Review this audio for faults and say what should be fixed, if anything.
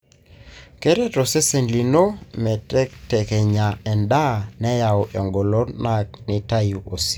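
A regular click recurs during the speech from 1.18 s to about 6.3 s, roughly five in all, spaced 1.28 s apart. This steady spacing is the mark of clock drift buffer slips. The likely cause is two devices on independent clocks differing by a few hundred parts per million, so the buffer between them drifts until a block of around fifteen samples is dropped or repeated. Network dropouts and packet loss would land at irregular times and leave audible gaps rather than evenly spaced clicks. To prevent it, lock both devices to one shared word clock, or insert an adaptive sample-rate converter between them.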